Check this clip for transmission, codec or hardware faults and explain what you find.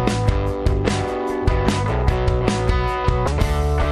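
One fault: damaged data in a compressed stream, from 3.24 to 3.28 s. Corrupted bytes in the coded stream made the decoder misread those frames and lose sync until it found the next frame header. The result is a brief glitch lasting about 34 ms.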